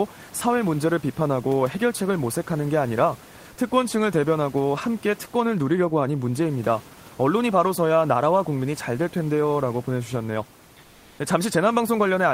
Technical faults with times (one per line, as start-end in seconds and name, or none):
10.83-11.19 comfort noise in place of the background